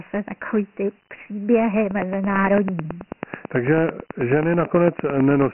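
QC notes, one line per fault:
Throughout: Dialogic VOX ADPCM, speech squeezed into 4-bit ADPCM, nothing above 3 kHz (fits 6,000 samples a second), with heavy gritty hiss trailing the syllables.
1.91–5.43 s: train of clicks right after "takový ty příběhy", about 30 regular ticks at 9.1 per second, around 15 dB over the speech, likely nearby interference.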